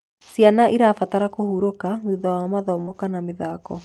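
From 2.17 to 2.97 s, repeated packet loss makes the speech choppy and robotic. Gaps up to 58 ms are patched by stretching the preceding sound.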